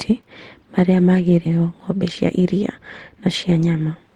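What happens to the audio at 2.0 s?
At 2.0 s the speech is running fast: from 1.49 s to 4.12 s it plays at about 112% of its normal rate with the pitch unchanged, so it sounds hurried. This is a jitter buffer speed-up. The receiver had built up more buffered audio than its target, so it repeatedly cut out short stretches one or a few pitch periods long, trimming roughly 0.3 s in total to pull the delay back down.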